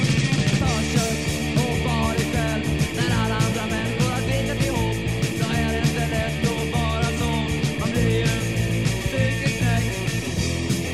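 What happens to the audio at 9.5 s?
Nothing goes wrong at 9.5 s; the audio plays through that moment intact, with no dropout, click or distortion.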